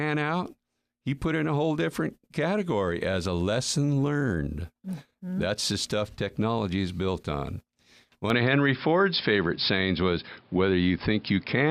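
Speech that abruptly turns duller and boxier at 8.3 s and stays that way to the end, with no gap at the change. The level steps by around 5 dB, and a new background noise sits roughly 35 dB under the voice. On a spectrogram, all energy above 5.3 kHz vanishes at 8.3 s, leaving a hard ceiling. The waveform shows the level step and a raised floor between phrases. The likely cause is an input switched to a poorer device mid-recording.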